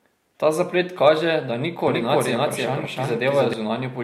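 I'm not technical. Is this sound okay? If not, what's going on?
No. From 1.87 s to 3.53 s, just after "zaplet kaže da ni", the speech has a doubled audio track: a second copy of the same speech plays alongside the first, trailing it by about a third of a second and roughly as loud. It has no echo tail or room sound, and it cuts in and out abruptly at those two points. The likely cause is the audio being captured twice, once through a slower path.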